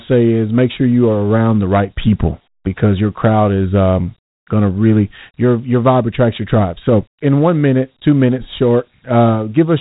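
Throughout the speech, Dialogic VOX ADPCM coding leaves a gritty hiss riding on every syllable. Nothing sounds above 3.8 kHz, which fits 4-bit samples at 8,000 a second. A spectrogram shows a hard ceiling there, with grainy noise filling the band beneath the voice.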